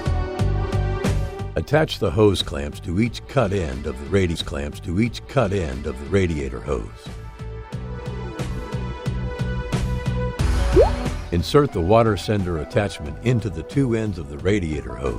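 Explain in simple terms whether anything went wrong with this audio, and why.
A stream segment repeated at 4.35 s: a two-second stretch of the audio plays a second time, running to 6.35 s, with a small blip where it jumps back. The player fetched or queued the same chunk of the stream twice, so that piece was heard again.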